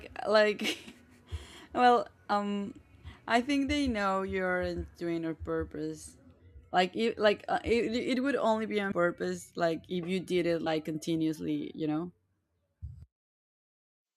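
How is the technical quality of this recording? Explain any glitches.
The speech has four brief dropouts. Compressed frames skipped at 0.87, 2.31, 8.91 and 10.66 s: a few missing or rejected frames make the audio jump ahead, dropping roughly 70 to 100 ms each time.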